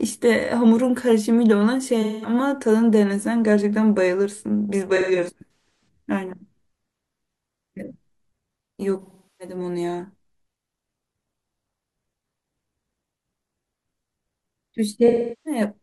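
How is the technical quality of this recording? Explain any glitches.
Technical quality suffers from four dropout patches caused by AAC frame loss with concealment. Compressed frames went missing and the decoder patched the gaps from the last good spectrum, producing smeared, noisy or phasey sound. The losses fall at 2.01–2.33 s (about 213 ms lost), 4.96–5.88 s (about 469 ms scattered over 0.85 s, longest gap around 150 ms), 9.02–9.55 s and 15.07–15.61 s (about 384 ms each).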